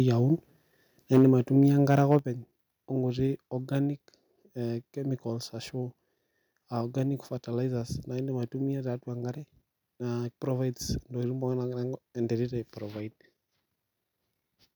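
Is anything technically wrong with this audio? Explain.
Yes, there are two related problems: the speech overloads the microphone input twice, and the input level then drops abruptly.

Microphone overload occurs from 1.13 to 1.28 s, driven about 6 dB past full scale, and again from 1.90 to 2.17 s, about 3 dB over. The loudest syllables sound harsh and crackly, likely because the peaks hit the converter's ceiling and their tops were sheared off. Unlike a level drop, this adds distortion.

Microphone volume stepped down at 1.18 s by about 2 dB and at 2.19 s by about 6 dB. The speech and the background noise both fall suddenly and stay lower, with no added distortion, which sets these drops apart from the overload. Each step follows an overloaded peak, which points to the call software likely cutting the device's input gain in response.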